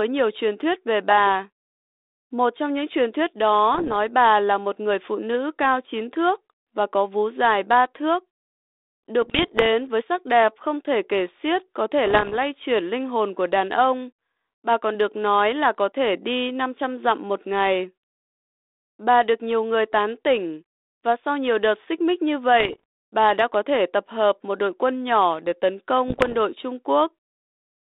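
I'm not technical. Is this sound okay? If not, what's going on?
No. Bit errors on an ADPCM link cause short pops and rough, crackly bursts at 3.74, 9.22, 12.06, 22.60 and 26.08 seconds, each under half a second. Flipped digital bits throw the phone-style decoder off track, so each glitch rings on briefly with jumpy loudness.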